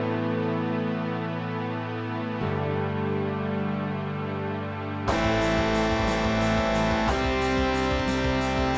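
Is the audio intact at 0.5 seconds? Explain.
Yes, at 0.5 seconds the audio is intact, with no dropout, click, distortion or other fault at that moment.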